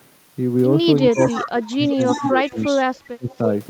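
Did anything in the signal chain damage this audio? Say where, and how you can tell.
Yes. An echo leak in call processing appears at 0.98–1.48 s, 1.87–2.99 s and briefly at 3.31–3.38 s: a copy of the speech returns 321 ms late, about 10 dB and then about 5 dB below it, and about 30 dB below in the last. An echo canceller likely let loudspeaker pickup through.

Speech suppressed in double talk occurs at 1.12–1.99 s, 2.16–2.8 s and 3.05–3.33 s, overlapping the echo. The talker dips by about 20, 10 and 30 dB for roughly half a second or less each, likely because the canceller couldn't separate local speech from echo.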